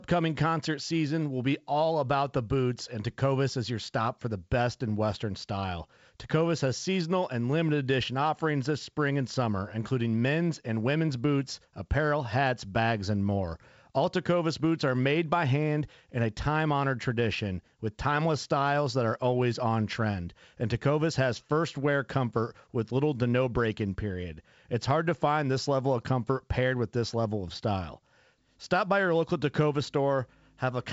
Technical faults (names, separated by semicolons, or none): none